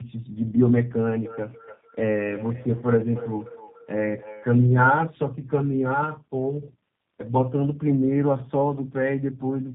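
From start to finish the speech carries tandem speech coding: two low-rate speech codecs in a row, likely AMR-NB then G.729A. Each re-encodes the other's errors, so it sounds rougher and more warbly than one narrowband codec. Nothing reaches above 3.6 kHz.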